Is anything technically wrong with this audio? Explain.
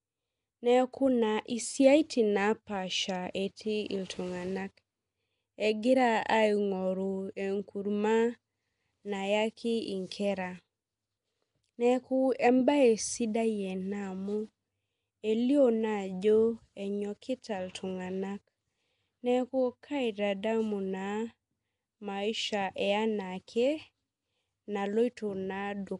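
Yes. Nellymoser compression, throughout: the speech has a rough, hissy halo and smeared underwater quality with nothing above 10.6 kHz, likely from Flash's Nellymoser Asao codec filling unbitted bands with noise.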